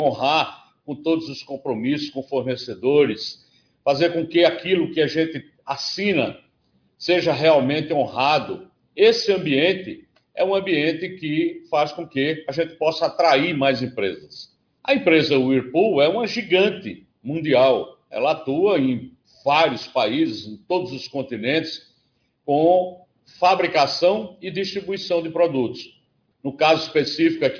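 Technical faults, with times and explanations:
No technical faults are audible anywhere in the clip.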